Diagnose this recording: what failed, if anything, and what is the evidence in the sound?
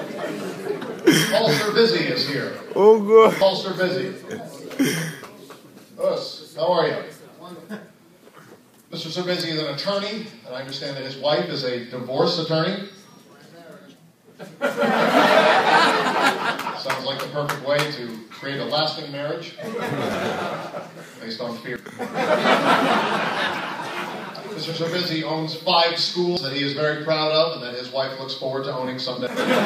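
Abrupt forward jumps, with no silence, occur at 3.41, 20.14, 21.76, 26.37 and 29.27 s, each losing roughly 0.1 to 0.3 s. The likely cause is a dropped buffer (overrun) at the driver or buffer stage: the hardware overwrote uncollected samples, splicing the remaining audio together.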